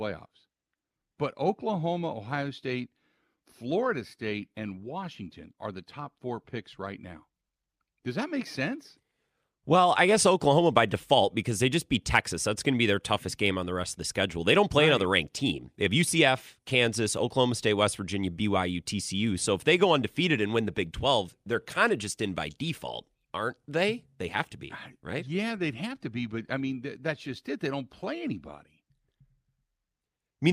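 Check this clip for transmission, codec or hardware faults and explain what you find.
No transmission, codec or hardware faults are audible anywhere in this speech recording.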